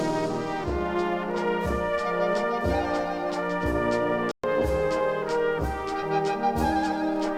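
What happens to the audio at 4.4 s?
The sound cuts out to silence from 4.31 to 4.44 s, a gap of about 122 ms, then resumes further along as if it had kept playing. This is likely a Bluetooth dropout: packets failed to reach the headphones in time and were discarded, a gap that fits roughly six lost packets.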